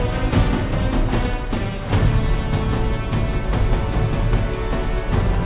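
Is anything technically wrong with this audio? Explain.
No, nothing here stands out as a technical problem; it all comes across just fine to the ear.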